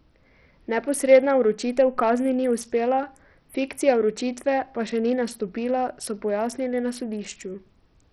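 Bluetooth SBC compression runs from start to finish of this speech clip. The treble flickers in and out and a gritty, grainy noise rides on the sound, with aliasing in the upper range. The likely cause is a starved SBC link, consistent with a very low bitrate near 64 kbps. The encoder splits the signal into a few wide sub-bands and leaves the weak top bands with almost no bits, while the remaining bands are quantised so coarsely that the damage is heavy.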